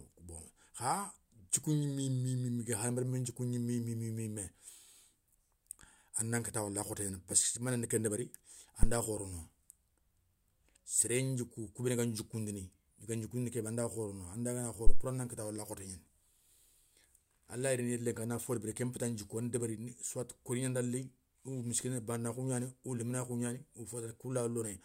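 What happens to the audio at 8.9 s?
At 8.83–8.97 s, just after "mané nendi ken débéri", a phantom power thump occurs: a supply switched on or off on the live input sends a step through the coupling capacitors. The deep thump peaks at about -12 dBFS and decays within 31 ms. It appears as one large low swing on the waveform and a brief low-frequency smear on a spectrogram.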